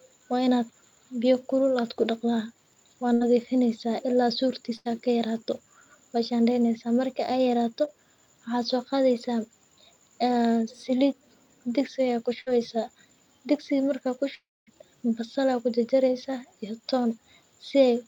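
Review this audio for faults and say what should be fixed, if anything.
Bursts of packet loss at 3.13–3.23 s, 4.77–4.87 s and 12.41–12.49 s: the speech gets held and faded, then jumps ahead, losing about 80, 80 and 60 ms.

Short concealed packet loss at 7.85–7.89 s: about 20 ms never arrived, so the decoder patched it with a quick smear before blending back in.

At 14.35–14.69 s the last sound is held and fades, then goes silent for roughly a quarter second, with about 0.32 s lost, likely a long network dropout.

A deeper jitter buffer plus forward error correction, or a more stable network path, would stop most of these gaps from reaching the listener.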